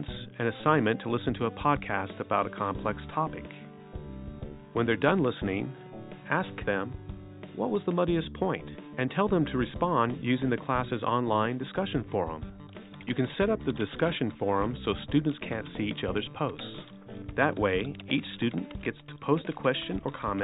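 No technical faults can be heard anywhere in the recording; the signal stays continuous and stable throughout.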